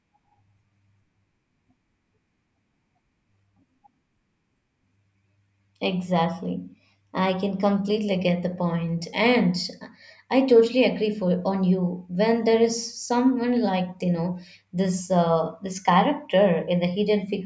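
No technical faults can be heard at any point in the recording, and the speech signal stays intact and continuous throughout.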